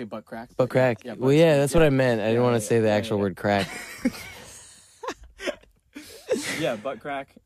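A deep thump lands at 1.78 s and dies away by 1.95 s. It is a phantom power thump. Supply voltage was switched on or off on a live input, and the step passed through the coupling capacitors. It peaks at about -13 dBFS and decays in about 38 ms.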